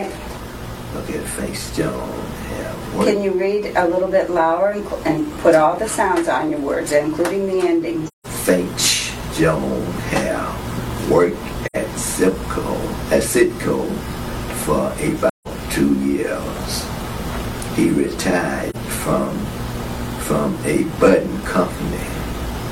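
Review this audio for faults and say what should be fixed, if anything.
Soft-edged silent holes at 8.07–8.26 s, 11.66–11.77 s and 15.29–15.48 s, and a brief dip at 18.70–18.76 s: AAC frame loss with muting, where missing frames are zeroed and overlapping windows fade across the gaps. Protect the stream with retransmission or forward error correction so that frames aren't lost.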